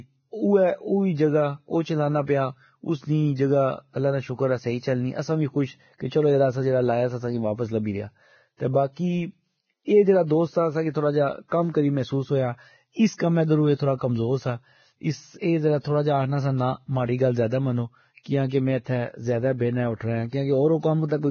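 From the start the speech sounds hissy and grainy, with nothing above 6.6 kHz. That points to heavy, likely Vorbis compression at a low bitrate, roughly 17 kbps, rather than plain low-pass filtering, which would leave no grain. At 13.18 s, just before "کمہ درو اے تھوڑا", a pre-echo appears: an 18 ms hiss leads the attack. The codec smeared block noise backward, unlike a click, which has no forward-leaking hiss.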